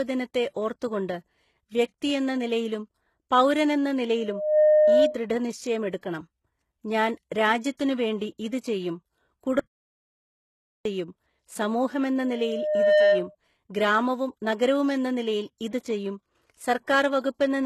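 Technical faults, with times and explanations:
Throughout: HE-AAC compression, likely. The treble is gritty and metallic with heavy codec damage and nothing above 12.3 kHz, because the upper band is rebuilt by copying lower bands upward rather than coded. The damage fits a very low bitrate around 16 kbps.
4.17–5.22 s and 12.22–13.35 s: loudspeaker feedback squeal. A single 609 Hz tone swells over roughly 0.4 to 0.7 seconds and sits about 10 dB above the speech. The microphone was picking up its own loudspeaker, and the loop gain exceeded one at that frequency.
9.59–10.85 s: audio dropout to silence. The speech cuts out for 1.26 s into complete silence with no room tone. The input was likely lost while recording continued, so whatever was said in that gap is gone.
15.70–15.73 s: pre-echo. A short hiss spreads 22 ms ahead of a sharp attack, softening its onset. The codec spread its quantisation noise across the whole transform block, so noise sized for the loud attack also filled the quiet moment before it.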